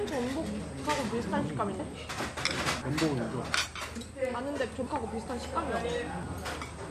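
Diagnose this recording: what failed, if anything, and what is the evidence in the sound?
At 3.76 s the sound jumps abruptly forward, with no gap of silence, roughly 150 ms of material simply missing. This points to the driver or buffer stage, most likely a dropped buffer (overrun): the capture software fell behind, hardware overwrote unread samples, and the surviving audio was spliced end to end.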